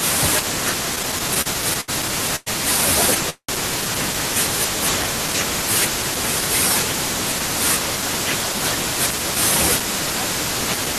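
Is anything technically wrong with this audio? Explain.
Yes. The speech has three timing faults.

From 0.95 to 1.90 s there are repeated stalls (stutter). Nine packet delays drained the buffer, and filler covers 184 ms, with the longest gap 72 ms. The speech drags and hiccups.

At 2.36 to 2.48 s a call audio freeze holds the sound as a brief buzz or hiss for 106 ms. Late packets likely emptied the jitter buffer.

At 3.30 to 3.50 s a second freeze stretches 187 ms. It fades and then goes silent for 70 ms, likely from another delivery delay. In both freezes the speech resumes where it stopped, with nothing missing.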